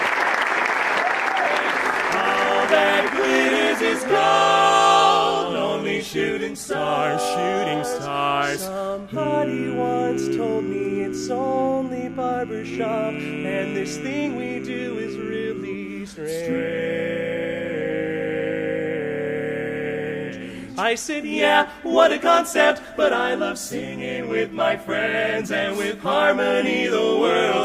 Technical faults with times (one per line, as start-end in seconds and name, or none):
none